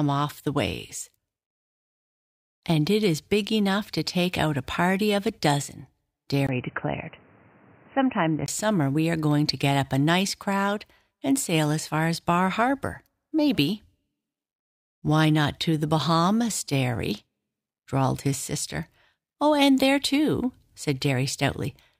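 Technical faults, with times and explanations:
6.47–8.48 s, input switched to a poorer device: after a 20 ms gap the sound goes dull and boxy, with nothing above 3 kHz and a new noise floor about 30 dB down at a similar level, then clears up again. That's likely a change to a headset call profile or another microphone.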